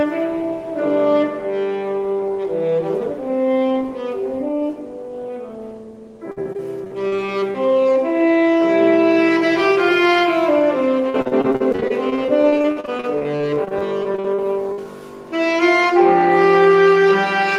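Choppy sound with pieces missing runs from 6.31 to 7.56 s and again, longer, from 11.10 to 14.85 s. This is repeated packet loss (robotic sound). Holes of up to about 50 ms keep recurring, each patched by extending the preceding sound, so roughly a fifth to a quarter of each stretch is filler.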